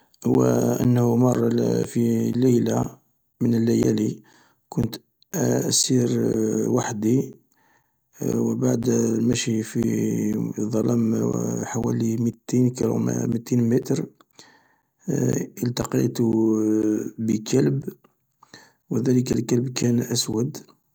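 From 0.34 s to 20.84 s the speech is broken by periodic USB or driver dropouts: every 0.5 s, some forty times in all, roughly 10 ms of audio goes missing and is replaced by silence. A background task briefly stalls the bus or driver on a fixed cycle. The result is a metronome-steady tick that vanishes in pauses, and its strict regularity sets it apart from the scattered, irregular gaps of network packet loss.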